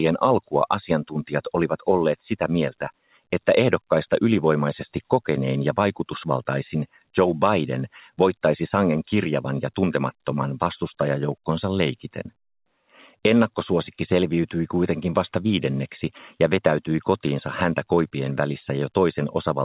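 At 1.04 to 1.5 s and again at 3.03 to 3.22 s, sound is cut by the noise suppressor. It mistakes the sound for noise and pulls it down, by about 14 dB and about 17 dB. Each time the level sinks.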